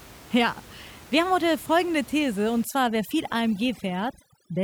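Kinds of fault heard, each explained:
Overdone noise removal: From 2.64 s to the end, a noise reducer set far too aggressively pulls individual frequency bands down whenever they sit near its noise estimate, so the room noise, earlier about 22 dB below the speech, drops and breaks up into twinkling specks.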